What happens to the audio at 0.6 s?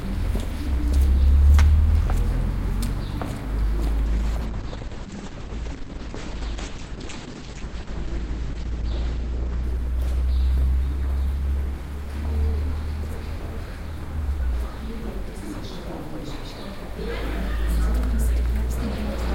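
Nothing goes wrong at 0.6 s; the audio plays through that moment intact, with no dropout, click, distortion or other fault.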